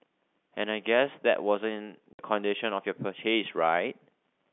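Packet loss filled with silence at 2.13 to 2.19 s: the speech drops out completely for 60 ms, consistent with two consecutive lost packets that the receiver replaced with nothing. The gap has abrupt edges, set against the telephone-band G.711 sound around it.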